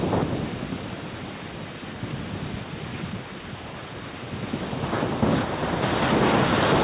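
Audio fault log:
No fault to log in this speech clip; its call path carries nothing above 4 kHz, as expected for that codec.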